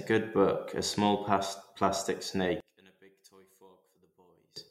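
One channel inverted, from 2.60 s to 4.56 s: right after "book a small plastic", the speech collapses by about 31 dB to a faint trace. The likely cause is one stereo channel with reversed polarity. The centred speech arrives equally in both channels, so when they are summed to mono it cancels, leaving only the small difference between left and right.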